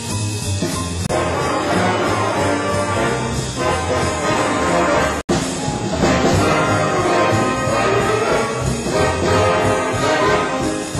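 At 1.07 to 1.09 s the sound drops to silence for about 28 ms, then comes back. At 5.21 to 5.29 s a longer gap follows, about 77 ms of dead silence. Both are Bluetooth stalls. The likely cause is radio interference delaying packets, so the headphones' buffer ran empty. Playback then paused until resent data arrived. Each gap is a clean hole with no fade, and the sound simply resumes afterwards.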